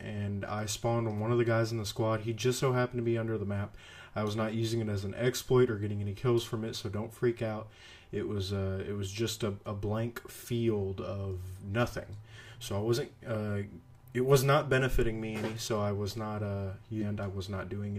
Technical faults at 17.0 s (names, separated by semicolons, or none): stream segment skipped